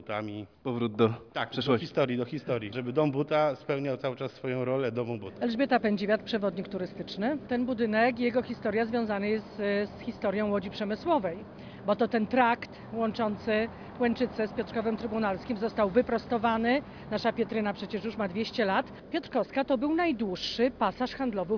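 No technical faults detected.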